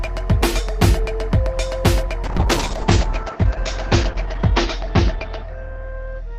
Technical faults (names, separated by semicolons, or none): call bitrate drop